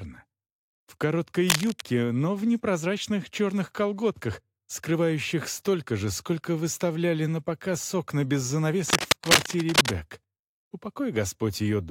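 A worn cable, connector or control was likely moved, so its contact resistance jumped around and added cable scratch noise: dense, ragged bursts of rustling at 1.49 to 1.81 s, about as loud as the sound, and at 8.90 to 9.89 s, somewhat louder than it.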